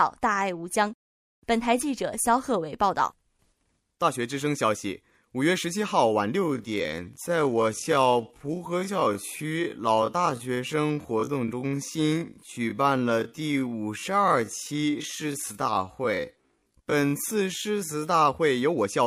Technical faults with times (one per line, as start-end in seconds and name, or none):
6.35-18.27 time-stretched section
6.67-8.65 Bluetooth SBC bit pool drop